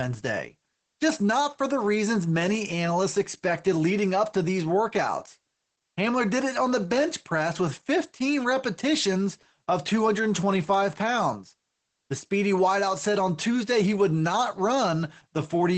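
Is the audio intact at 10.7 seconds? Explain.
No. From 10.61 to 10.74 s a loose connector crackle breaks in: a worn or dirty contact briefly making and breaking the line chops the signal into an irregular, scratchy burst. Unlike a dropout or a single click, it is a rapid, uneven burst of crackle. The moment also carries the Opus voice compression heard across the whole speech clip. Nothing sits above 8.6 kHz, and the muffled, slightly hoarse, robotic tone fits SILK coding at a low bitrate near 12 kbps. That steady codec colouring differs from the crackle's sudden, localized disruption.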